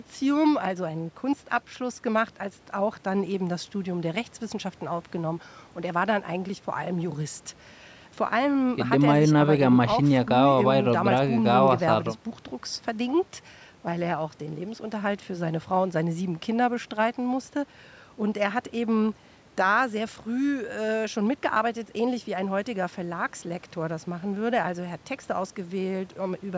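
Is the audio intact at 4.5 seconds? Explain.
Yes, the speech at 4.5 seconds is intact, with only the ordinary call microphone processing present, which trims the lowest bass and leaves nothing above 8 kHz without damaging the sound.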